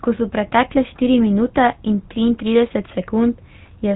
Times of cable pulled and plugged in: none

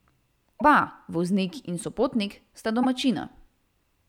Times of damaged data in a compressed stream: 0.56-0.62, 2.83-2.85

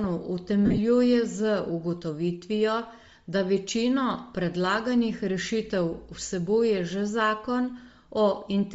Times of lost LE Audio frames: 0.66-0.79

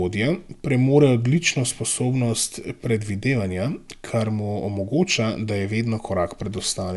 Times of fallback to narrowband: none

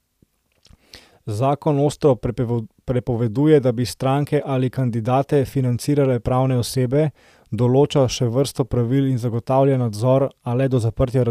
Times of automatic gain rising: none

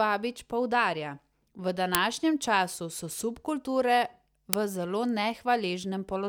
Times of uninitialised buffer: 1.95, 4.53

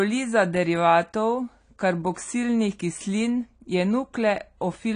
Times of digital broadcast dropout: none

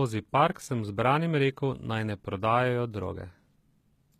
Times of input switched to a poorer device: none

